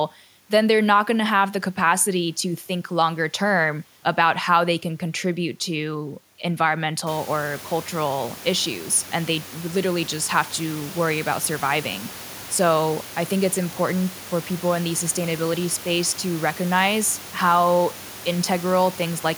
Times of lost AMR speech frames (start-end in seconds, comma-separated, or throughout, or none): none